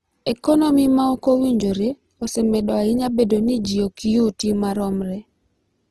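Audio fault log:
Throughout, Opus compression: the speech sounds rough and grainy, with plainly audible noisy texture and nothing above 12 kHz. This likely comes from Opus in its music mode, which fits about 16 kbps. It fills starved bands with folded or noise content.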